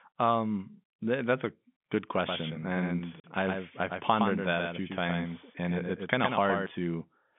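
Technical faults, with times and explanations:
2.28 to 6.66 s, doubled audio track: a second full-band copy of the speech trails the original by about a tenth of a second, roughly 5 dB down, with no room colour on it, and it cuts in and out abruptly. Likely a slower second capture path feeding the same mix.
3.20 s to 3.24 s, packet loss filled with silence: a 40 ms hole with hard edges chops the speech here, which fits two lost packets at 20 ms each. The receiver just played nothing in their place, all inside that telephone-band, G.711-coded line.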